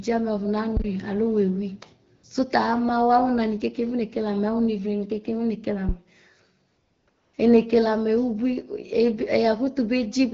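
The sender judged the talker silent three times and stopped sending speech frames, and the receiver filled each gap with AMR comfort noise synthesised from a rough level and spectrum description. This happens from 2.15 to 2.23 s for 80 ms, from 6.67 to 7.07 s for 400 ms, and from 7.09 to 7.33 s for 240 ms. Each time, the real background gives way to a smooth, steady hiss that switches in and out.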